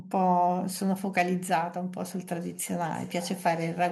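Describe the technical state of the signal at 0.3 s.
At 0.3 s the speech signal is intact, with no dropout, clipping, glitch or other fault audible at that point.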